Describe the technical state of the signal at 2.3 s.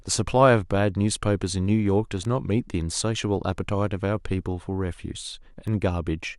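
A bit error spike at 2.25 s: a single flipped bit in memory or on the digital link throws three consecutive samples off by a power of two before they snap back, peaking around -21 dBFS. The speech carries one sharp, broadband tick unrelated to the signal.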